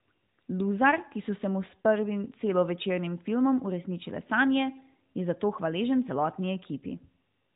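Nothing stood out as a fault on listening to this speech.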